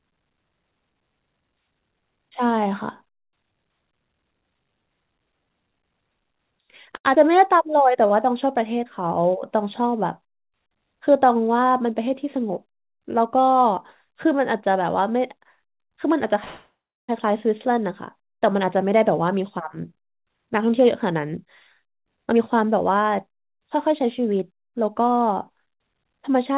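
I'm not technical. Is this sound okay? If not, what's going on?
No. The speech has several call-transmission hiccups, mostly in the receiving side's timing.

At 6.96 s there is a short stall from a late packet. A piece of audio arrived late, so the last sound is held for about 0.09 s, then resumes with nothing lost.

At 7.15 s there is a short concealed packet loss. About 0.04 s of audio never arrived. The gap was papered over with a brief smear, so a tiny sound may be gone.

From 7.58 to 8.08 s there is a jitter buffer slow-down. The speech plays at about 93% speed, with no change in pitch, to rebuild a reserve. Sounds are drawn out slightly.

From 11.59 to 12.66 s, and again from 18.60 to 25.96 s, there is a jitter buffer speed-up. The speech runs about 8 to 9% fast at the same pitch. It sounds hurried, trimming roughly a tenth of a second and then roughly seven tenths.

From 16.44 to 17.10 s there is a call audio freeze. 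The sound stops for about 0.64 s, fading to silence for about 0.31 s. Then it continues where it left off, likely because audio was held up on the network.

The whole clip also sounds a little muffled, since the call system carries nothing above 4 kHz.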